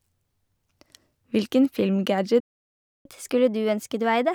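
At 2.4 s the speech just cuts out and stays silent until about 3.05 s, a gap of roughly 0.65 s. That's a playback stall, likely the player running dry or its thread getting blocked, so nothing reached the output until it recovered.

Right from 3.05 s through to the end, you get catch-up at higher speed. The player runs its backlog at 1.1x by resampling, so the speech sounds rushed and rises about a semitone and a half in pitch while it claws back the lost time.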